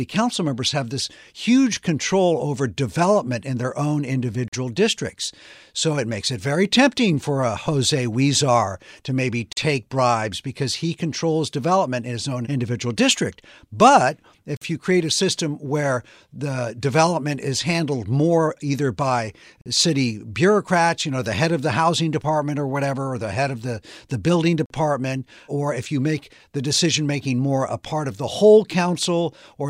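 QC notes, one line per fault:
4.48, 9.53, 14.57, 19.61 and 24.66 s, gap between chunks: the speech was split into 5-second chunks, and each join is followed by 44 ms of inserted silence, so playback drops out abruptly at those regular intervals without losing any content, leaving short hard-edged holes.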